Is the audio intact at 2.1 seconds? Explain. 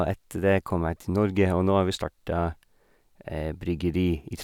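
Yes, the audio at 2.1 seconds is intact, with no dropout, click or other technical fault at that moment.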